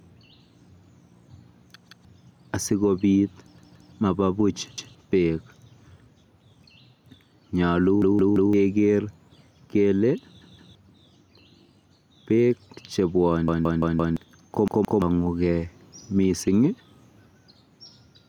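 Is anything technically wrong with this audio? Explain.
Yes. The speech has two problems.

Gain pumping runs through the whole clip. The gain ducks by about 5 dB whenever the talker gets loud, so the level breathes and the dynamics sound squashed. The likely cause is input gain set far too high, with a fast limiter or compressor clamping down on every peak. On a waveform, the quiet stretches rise visibly between phrases. On a spectrogram, the noise floor brightens and darkens in step with the speech.

A repeated buffer occurs seven times: 1.88–2.05 s, 3.58–3.93 s, 4.78–4.95 s, 8.02–8.53 s, 10.41–10.75 s, 13.48–14.17 s and 14.68–15.02 s. Each time, a 170.67 ms chunk plays again, between once and four times. The longest run is at 13.5 s. That chunk length fits an 8192-sample buffer that the device replayed because fresh audio arrived late. It is heard as a stutter with a hard join at each repeat, and roughly 0.15 to 0.7 s of real speech goes missing. 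On a waveform, identical blocks sit side by side. A spectrogram shows the same pattern copied, with vertical edges at the seams.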